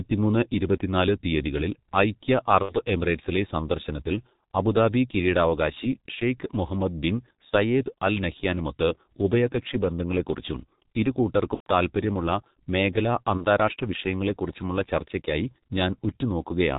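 G.723.1 codec, throughout: heavy coding at 6.3 kbit/s in 30 ms frames removes everything above 4 kHz, so the speech is muffled and hoarse with smeared consonants. VoIP packet loss concealed by the speech codec at 2.63–2.74 s, 7.49–7.53 s (after "കിരീടാവകാശി ഷെയ്ഖ് മുഹമ്മദ് ബിൻ"), 11.54–11.67 s and 13.37–13.45 s (before "വിഷയങ്ങളെക്കുറിച്ചുമുള്ള ചർച്ചയ്ക്കായി"): the decoder extrapolates over the missing 30 to 120 ms, producing a fading buzzy tone or coloured noise and a weak, distorted recovery.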